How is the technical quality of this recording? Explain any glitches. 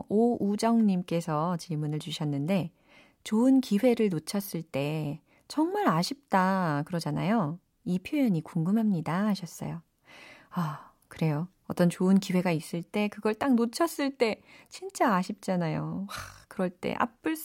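I hear no glitches anywhere in this speech recording.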